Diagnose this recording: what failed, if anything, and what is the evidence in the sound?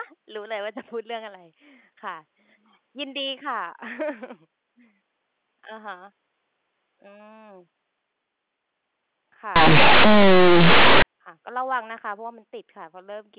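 Between 9.56 and 11.02 s the sample-format conversion stage fails: mu-law telephone bytes are handed on as linear 8-bit samples with no expansion, so the audio is companded audio read as linear. Because mu-law puts small values near the top of the byte code, every sign change jumps across roughly half the output range. The speech, already narrowed to below 4 kHz by the G.711 path, turns into loud, harsh buzz, and the pauses fill with heavy noise.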